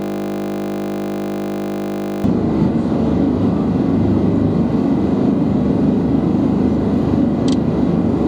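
From the start to 2.24 s, already under way when the clip begins, a system hang loop repeats one 20 ms piece of audio, producing a steady 50 Hz buzz. Throughout the clip, a channel delay (doubling) makes one channel arrive 40 ms late; summed to mono, this late copy is heard at equal level as a doubling.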